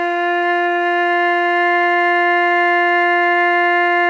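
No technical faults can be heard anywhere in this music clip. Nothing in the audio points to a problem in how it was captured, processed or delivered.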